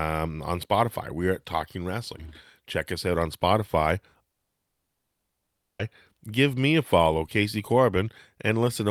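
Speech, cut off at 4.31 s by a long network dropout, the likely cause: the audio goes silent for about 1.5 s until 5.82 s, resuming at "give me a follow" with that stretch lost. The waveform flatlines and the spectrogram shows an empty vertical gap.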